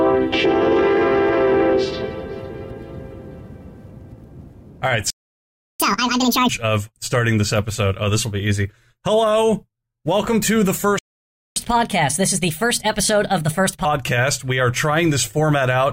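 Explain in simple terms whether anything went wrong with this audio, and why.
The sound cuts out twice: from 5.10 to 5.80 s (about 0.69 s) and from 10.99 to 11.56 s (about 0.57 s). Each is a playback stall. The player most likely ran short of data or was held up, so it went quiet until it could carry on. Unlike a dropout, where a chunk simply vanishes and the sound jumps ahead, here the silence is a real pause in the flow before the sound resumes.

Right after each pause comes catch-up at higher speed. The player rushes through the audio it fell behind on. From 5.80 to 6.49 s it runs at twice normal speed, with the pitch up by nearly an octave. From 11.56 to 13.85 s it runs 1.25 times faster, with the pitch up by about four semitones. What separates this from a plain pitch problem is that the speed rises along with the pitch, it only happens straight after a stall, and both return to normal once the lost time is made up.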